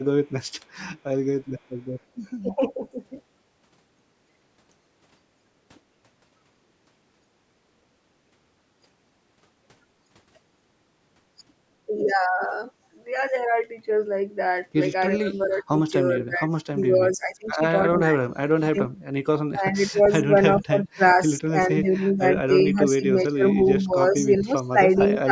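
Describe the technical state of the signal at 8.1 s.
At 8.1 s the speech is intact, showing only the ordinary band limits of call microphone processing: the lowest bass is trimmed and nothing reaches above 8 kHz.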